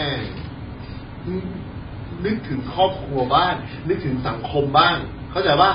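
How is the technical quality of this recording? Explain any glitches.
The technical quality is poor: the speech sounds dull and smeared from start to finish, with nothing above 5 kHz and a warbling, fizzy texture on sustained sounds and sibilants. This is likely AAC compression, with AAC-LC pushed to a very low rate that fits about 16 kbps. With so few bits per frame, the encoder drops the top of the spectrum, leaves holes between bands, and coarsely quantises what remains, so detail and crispness are lost throughout.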